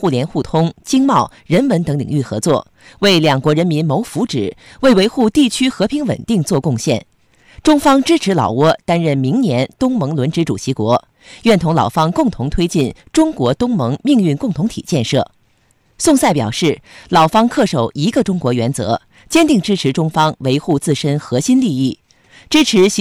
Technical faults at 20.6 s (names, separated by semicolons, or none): hard clipping